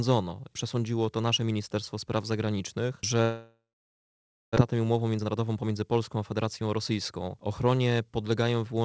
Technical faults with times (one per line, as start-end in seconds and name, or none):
3.22-4.58 long network dropout
4.72-6.91 jitter buffer speed-up